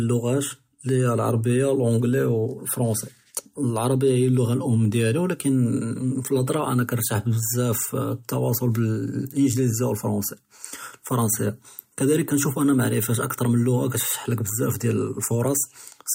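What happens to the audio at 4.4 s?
Nothing goes wrong at 4.4 s; the speech runs on intact through that moment, with no dropout, click or distortion to be heard.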